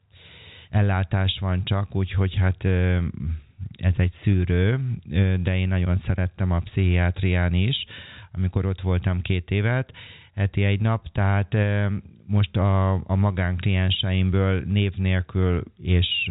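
No technical faults occur in this speech clip; it is narrowband telephone audio with nothing above about 3.8 kHz.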